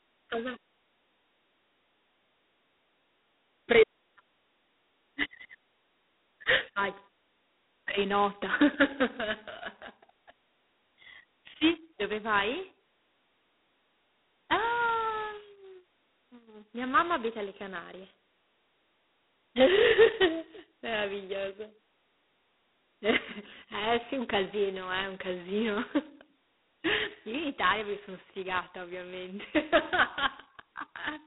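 Throughout the speech, G.726 ADPCM at 16 kbit/s codes each sample as only 2 bits of prediction error, producing a harsh, rasping hiss that rises and falls with the speech level. A spectrogram shows a hard ceiling near 3.9 kHz and a 250 Hz–3.7 kHz line band filled with grainy noise.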